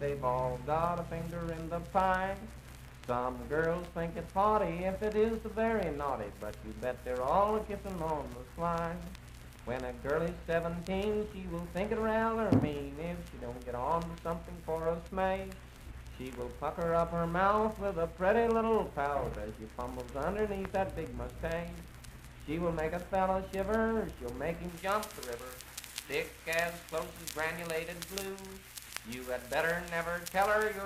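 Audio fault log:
24.69–30.86 s, pre-emphasis left on: the treble boost applied for transmission was never undone by the matching de-emphasis, which fits a J.17 curve. The top end sits about 11 dB higher at 10 kHz than at 1 kHz, so the sound turns thin, bright and sibilant.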